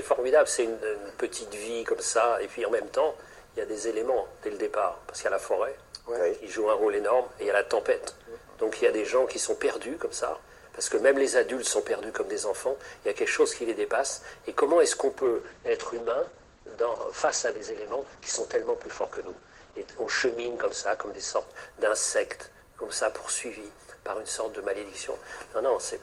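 A call bitrate drop hits from 15.18 to 23.89 s: the sound turns rough and muffled, top end capped near 8 kHz instead of 20 kHz, bottoming out for about 5.4 s, which fits a fall from roughly 96 kbps to 9 kbps.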